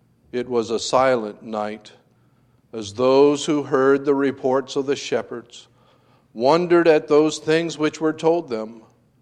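No technical faults can be heard anywhere in the recording. The sound runs steadily, with nothing that interrupts or alters it at any point.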